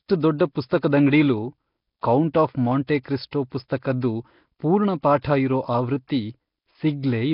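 Nellymoser compression runs throughout: nothing survives above 5.3 kHz, and a rough, hissy halo and smeared, underwater blur cling to the speech. The likely cause is the Nellymoser Asao codec, which starves weak bands of bits and fills them with noise, fitting about 22 kbps.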